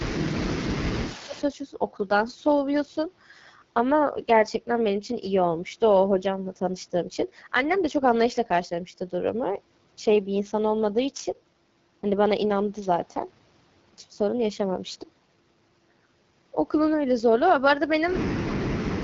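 Throughout, the speech has the rough, raspy grain of the AMR wideband (HD Voice) codec at a low rate, which fits about 8.85 kbit/s; a spectrogram shows nothing above 7.4 kHz. From 0.0 to 1.43 s an echo leak is audible: a faint copy of the voice trails about 143 ms behind, some 20 dB down, likely from a loudspeaker path the echo canceller failed to clear. On a spectrogram it appears as a weak, delayed doubling of the speech pattern. Over the same span, 0.08 to 1.35 s, speech is suppressed in double talk: the voice dips by roughly 15 dB for about a second in total, likely because the canceller turned down the talker while the far side spoke. The waveform shows matching notches in level. From 18.49 s to the end, a deeper suppression removes about half a second of speech, with drops near 40 dB, leaving a nearly flat waveform.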